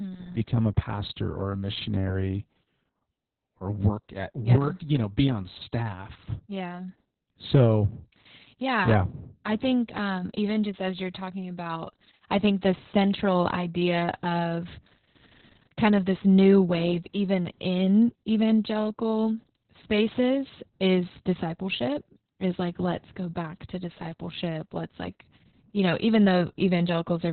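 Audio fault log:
Throughout: heavy Opus voice compression. The speech is muffled and hoarse, with nothing above about 4.2 kHz, which fits a narrowband SILK stream near 6 kbps.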